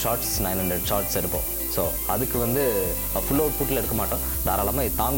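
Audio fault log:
throughout: low bit depth with noise shaping. The sound is held at only 4 bits, so every sample is rounded very coarsely. The rounding error is fed back and pushed toward the high frequencies. The result is a steady, thin hiss that climbs sharply toward the top of the band. It sits at roughly the same level as the sound itself.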